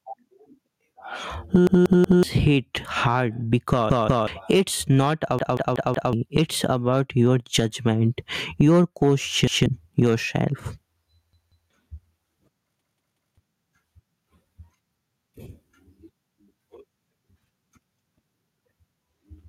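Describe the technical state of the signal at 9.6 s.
At 9.6 s the audio is inside a repeated buffer running from 9.47 to 9.66 s. New data arrived late, so a 186 ms block, which fits an 8192-sample buffer, played once more. It sounds like a stutter, and the waveform shows an identical segment with a hard seam.

Gain pumping is also audible here. The gain swings by about 15 dB, likely from excessive input gain driving a fast limiter. On the waveform this looks like flattened peaks, with a noise floor that rises and falls.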